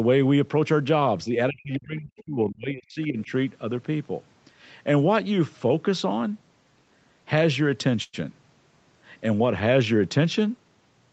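From 1.27 to 3.31 s, the echo canceller likely could not tell near-end speech from loudspeaker echo during double talk. This is speech suppressed in double talk: it turned the talker down by as much as about 35 dB, for about a second and a half in total, so the speech dips and breaks up.

Inside that stretch, at 1.73 to 1.79 s and again at 2.17 to 2.21 s, echo cancellation left residue, which is likely the other side's voice leaking through. These are brief scraps of a second voice, about 30 dB and then about 25 dB below the talker.

At 8.03 to 8.15 s, a late packet left the jitter buffer empty, causing a short stall. The receiver stretched the last sound for 100 ms until the packet arrived, so nothing is lost, but that moment hangs unnaturally with a faint buzz or dip.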